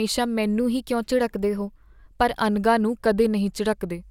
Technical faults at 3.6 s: none

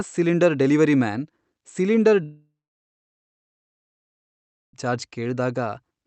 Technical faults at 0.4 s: none

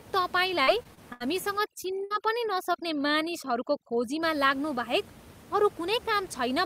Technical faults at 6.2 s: none

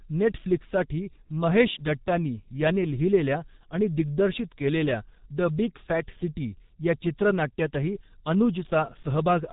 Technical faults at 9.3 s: G.723.1 codec

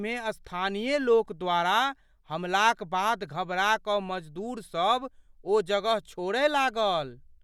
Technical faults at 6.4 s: none

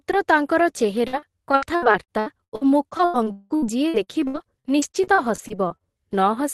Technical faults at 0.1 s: none

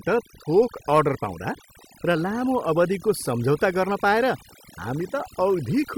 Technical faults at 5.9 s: overdone noise removal

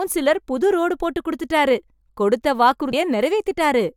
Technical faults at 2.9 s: damaged data in a compressed stream

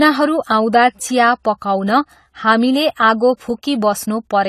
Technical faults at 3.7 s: AAC compression

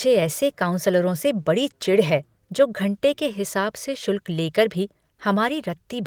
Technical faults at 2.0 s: none

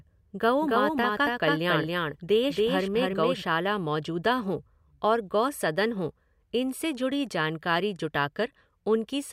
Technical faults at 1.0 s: doubled audio track

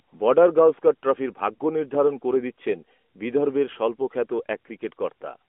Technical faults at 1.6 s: lost AMR speech frames

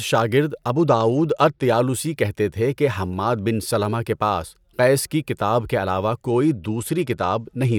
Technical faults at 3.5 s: none

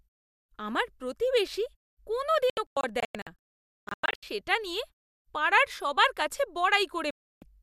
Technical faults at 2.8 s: digital broadcast dropout

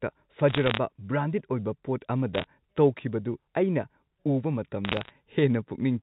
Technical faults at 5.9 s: none

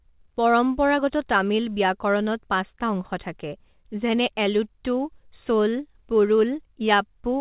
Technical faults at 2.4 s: none

